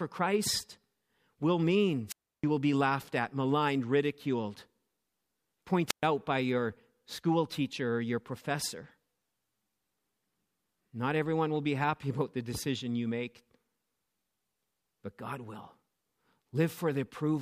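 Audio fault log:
2.07–2.44 s: wireless microphone squelch dropout. The FM signal fades, so hiss rises briefly. The receiver squelch then mutes the output for about 315 ms before the sound returns.
5.87–6.03 s: wireless microphone squelch dropout. A shorter fade produces the same hiss and a 122 ms muted gap.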